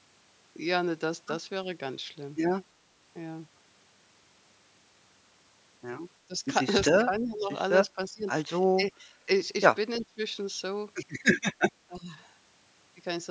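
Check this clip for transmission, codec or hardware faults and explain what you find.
The speech drops out repeatedly from about the middle of the clip, most likely from speech suppressed in double talk, at 6.27–6.44, 6.95–7.5, 7.88–8.28, 8.63–9.28, 10.0–10.21 and 11.86–12.14 s. An echo canceller, unable to separate the near talker from loudspeaker echo while both sides spoke, turned the signal down. The voice dips by roughly 15 to 25 dB, sounding choppy and briefly swallowed.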